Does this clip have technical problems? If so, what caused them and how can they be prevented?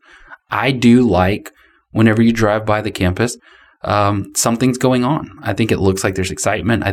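No, there are no technical problems to point to in this speech clip. With nothing wrong, there is nothing here that needs preventing.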